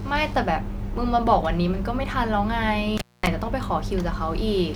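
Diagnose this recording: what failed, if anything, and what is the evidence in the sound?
An intermittent contact in the analogue wiring cuts the speech from 2.98 to 3.27 s, with the line open for 222 ms. Crackle marks both edges, with faint hiss between. On a waveform the signal collapses to a thin band; a spectrogram shows vertical broadband clicks bracketing a near-empty gap.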